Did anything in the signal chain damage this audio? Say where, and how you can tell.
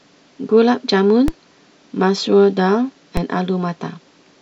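Yes. A DC step hits the converter stage at 1.28 s and 3.17 s. Each zero-line jump of about -7 dBFS thumps, then decays through a 20 Hz high-pass.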